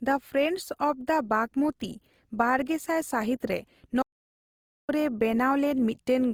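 Low-bitrate audio saved at a high bitrate runs through the whole clip. The file is a high-rate MP3, but the speech carries the artefacts of a much leaner encode made earlier. That points to a source that was likely squeezed by a low-bitrate codec, around 24 kbit/s, before being re-encoded at something like 256 kbit/s. Content is present up to about 20.2 kHz. The second pass preserved the damage of the first without repairing any of it.

An audio dropout to silence follows at 4.03 s, straight after "ᱫᱟ ᱵᱟᱜᱢᱚᱛᱤ ᱵᱟᱨᱜᱮᱥᱟᱭ ᱥᱟᱹᱦᱤᱛᱨᱮ". The speech cuts off mid-flow and the track falls to silence until 4.89 s, about 0.86 s later. No room tone or background survives in the gap. This is likely a momentary loss of the input signal while writing continued with silence, so whatever was said in that stretch is gone.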